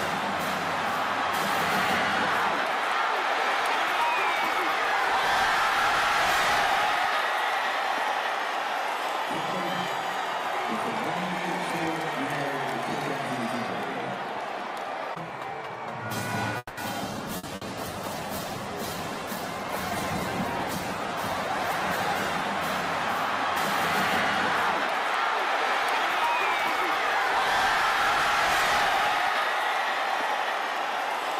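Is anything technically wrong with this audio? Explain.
Yes, several network faults cluster between 16.6 and 23.7 s.

From 16.57 to 16.80 s there is a call audio freeze, likely because packets stalled in transit and the jitter buffer ran dry. The receiver stretched the last sound into a fading buzz or hiss for about 200 ms, with a brief silence. The audio then resumes exactly where it stopped, so nothing is lost, but a gap has been inserted.

A call bitrate drop runs from 17.13 to 23.73 s. The bandwidth estimate fell and the encoder went from 64 kbps down to 12 kbps, staying at that floor for roughly 4.9 s. The coarser coding and trimmed high frequencies make the sound rough, watery and muffled until quality returns.

Within that stretch come two bursts of packet loss, at 17.37 to 17.46 s and 17.55 to 17.64 s. Each time about 60 ms of packets never arrived in time. The receiver covered each gap with a fading continuation of the last sound, then skipped ahead, so both pieces are genuinely missing.

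From 19.35 to 19.92 s a jitter buffer speed-up occurs. Too much audio had built up in the buffer, so the receiver repeatedly cut out short pitch-period slices, about 70 ms in total. Playback runs at roughly 109% speed with unchanged pitch and sounds hurried.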